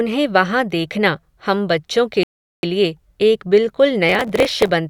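Speech runs for just over two seconds before a rebuffering stall cuts it to silence from 2.23 to 2.63 s. It then resumes exactly where it left off, adding about 0.40 s. Unlike a dropout or packet loss, nothing is missing; the player simply waited for more data. From 4.09 to 4.69 s a processor overload crackle rides on the speech, a gritty tearing made of dozens of tiny skips. It points to buffers of well under a millisecond repeatedly missing their deadline. Because the gaps are so short and so many, it sounds like crackle rather than distinct cuts, and it stops once the load eases.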